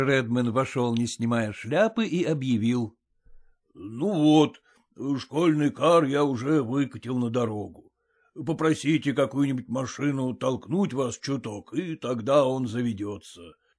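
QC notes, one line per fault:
No faults found; nothing to log.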